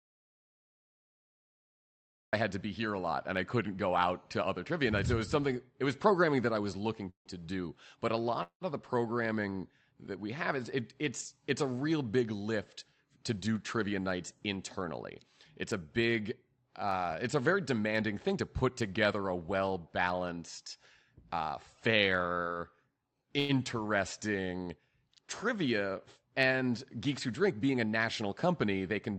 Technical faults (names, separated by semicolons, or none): audio dropout to silence; call audio freeze; jitter buffer speed-up; repeated stalls (stutter)